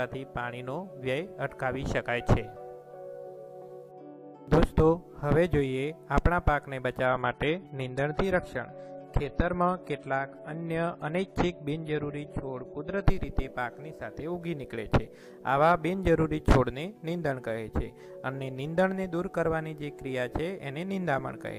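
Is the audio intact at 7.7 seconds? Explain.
No. At 7.7 seconds the sound is inside a stretch of adaptive stream playback at a lower bitrate, running from 7.06 to 13.06 s. The connection slowed, so the player switched to a leaner version of the stream. The sound fits a drop from 96 to 32 kbit/s AAC. The switch is sudden, with no gap. The treble thins, with nothing above 14.1 kHz, and codec artefacts become more audible until quality returns.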